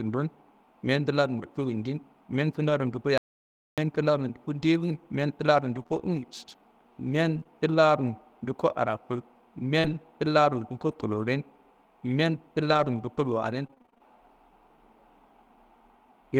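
At 0.85 s there is a lost packet rebuilt from error correction. One 20 ms packet went missing. The next packet carried a low-bitrate copy, and the decoder played that instead. So there is no gap, just a brief rough, noisy patch in the speech.

From 3.18 to 3.78 s comes an audio dropout to silence lasting about 600 ms. The speech cuts off abruptly and returns mid-flow. The gap is silence, with no room tone. The likely cause is a lost input while zeros kept being written.

Between 5.7 and 14.0 s there are scattered short gaps. Around fifteen small holes appear, each filled by extending the preceding sound. The longest is about 40 ms. Together they cover only a few percent of that span. They come across as brief ticks, smears and hiccups.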